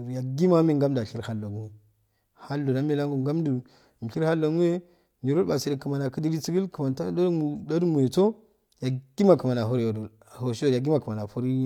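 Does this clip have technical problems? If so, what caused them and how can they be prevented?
No, this clip has no technical problems, so there is nothing to trace back or prevent.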